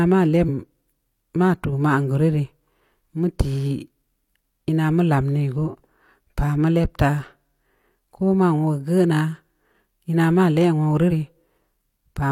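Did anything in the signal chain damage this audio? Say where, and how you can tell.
Yes. The damage sits at the codec stage, as damaged data in a compressed stream. Brief disruptions occur at 0.45 to 0.48 s and 11.07 to 11.12 s. Corrupted bytes made the decoder misread those frames, lose sync, and hunt for the next valid header.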